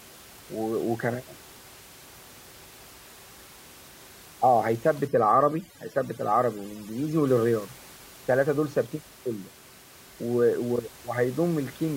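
From 5.07 to 7.27 s, overdone noise removal leaves twinkling specks in near-silent gaps, unlike steady room noise about 23 dB down.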